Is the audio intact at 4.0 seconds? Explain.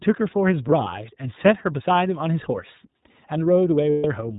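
No. Lost iLBC frames from 3.90 to 4.05 s leave a 140 ms gap that the decoder fills by repeating the last pitch cycle mixed with noise, so it sounds like a held, buzzy vowel. The whole clip also carries plainly audible iLBC codec damage: everything above 4 kHz is gone, and the speech has a rough, synthetic edge.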